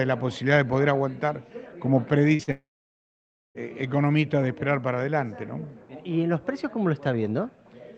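At 2.35 s the first short concealed packet loss begins. About 40 ms of audio failed to reach the decoder in time. The receiver filled the gap by extending the preceding sound, then blended back into the real signal at 2.42 s. A second loss follows almost at once, from 2.43 to 2.50 s, again about 40 ms lost. Together they sound like a quick smear and wobble.

The long network dropout starts at 2.51 s and runs to 3.58 s. Just over a second of audio is gone. For roughly the first tenth of a second the decoder stretches the last sound into a fading buzz or hiss. Then about 0.92 s of silence follows. The sound resumes at 3.58 s, with the missing stretch simply skipped. The cause is likely a stall in packet delivery across the network. The Opus call path limits the audio to about 8 kHz, and its coding noise fits a modest call bitrate.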